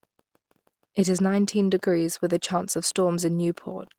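No technical faults can be heard anywhere in the speech.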